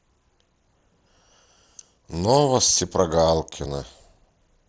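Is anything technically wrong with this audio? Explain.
Yes. At 2.56 s the speech has a tiny, barely noticeable glitch, a brief smear lasting about 7.5 ms where the sound briefly repeats itself before carrying on. This is concealed Bluetooth headset packet loss. The gap points to a single voice packet lost between headset and phone. The receiver filled the hole by continuing the waveform with the closest-matching stretch of the preceding audio, so the loss is almost hidden. The light graininess of the mSBC headset codec is audible on louder syllables.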